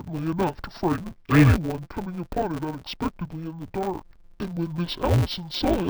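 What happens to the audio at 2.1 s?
At 2.1 s the speech carries the interleaved-audio-read-as-planar fault, which runs through the whole clip. Each block of about 5.8 ms, which fits a 256-sample buffer, has its alternating left and right samples split into halves, each played at half speed. At this block length there's no clear octave drop, unlike a simple pitch or speed error. The speech sounds dull and robotic with a steady 172 Hz buzz, the block rate.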